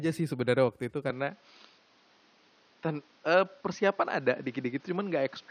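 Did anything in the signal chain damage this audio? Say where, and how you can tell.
Yes. Right after "sih sebenernya waktu itu", at 1.10 s, the speech abruptly turns dull and boxy with no gap, stops above 6.4 kHz, shifts level by about 5 dB and gains a new noise floor. That's likely an input switched to a poorer device at the capture stage.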